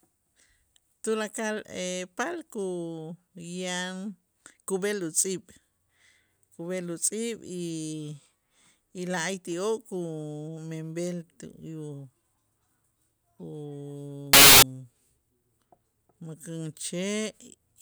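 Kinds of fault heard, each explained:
Samples built from the wrong bytes, 14.33 to 14.62 s: for about 0.29 s the speech gives way to a blast of loud, harsh broadband noise, because each sample is being assembled from misplaced bytes, whether through a one-byte offset, reversed byte order or a wrong alignment assumption. The rapidly fluctuating low-order bits end up as the most significant part of every value, so the waveform turns to harsh noise.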